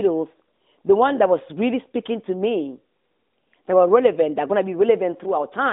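No faults are audible in the speech, which sits on an AMR narrowband mobile line at a quality that fits the 12.2 kbps mode, with the band running from about 200 Hz to 3.7 kHz, nothing above 3.8 kHz, and only light coding colouration.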